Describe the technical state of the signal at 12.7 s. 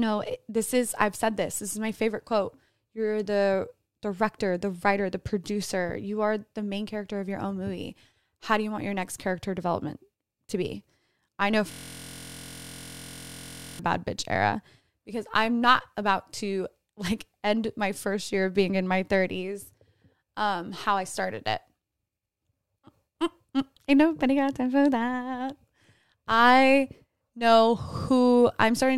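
At 12.7 s the sound is a steady, mechanical buzz at about 43 Hz: one 23.22 ms sliver of audio repeating identically, roughly ninety times over. This is a system hang loop, running from 11.71 s to 13.79 s, between "to be I know" and "bad bitch era because". The computer or driver stalled while the audio hardware kept replaying the same ring buffer, whose length fits a 1024-sample buffer. The loop is so short that the repetition fuses into a pitched hum.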